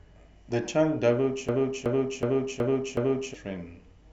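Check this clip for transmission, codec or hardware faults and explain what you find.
There is one hardware fault. From 1.49 to 3.34 s the speech sticks in a machine-gun stutter, with one 0.37 s fragment repeating five times at 2.69 Hz and about two seconds of audio lost. This is a system hang loop: the computer froze while the sound hardware kept replaying its ring buffer, which fits a 16384-sample buffer.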